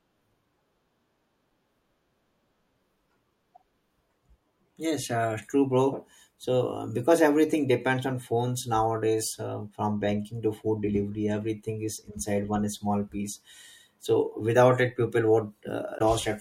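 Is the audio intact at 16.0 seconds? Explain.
No, there is damaged data in a compressed stream at 15.97 to 16.01 s. Corrupted bytes throw the decoder off frame sync until it finds the next header, producing a brief chirp, squawk, click or short hole.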